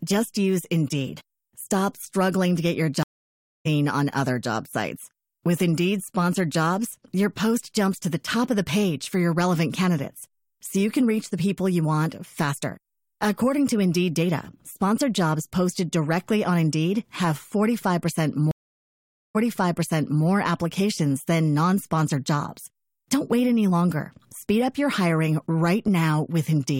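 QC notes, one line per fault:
3.03–3.67 s, stream reconnect: the connection dropped and a fresh decoder restarted mid-stream, so about 0.62 s of silence ends with sound resuming roughly 0.7 s further on.
18.51–20.25 s, stream reconnect: the link broke, the server resent buffered audio on reconnecting, so after about 0.83 s of silence the sound jumps back about 0.91 s and repeats.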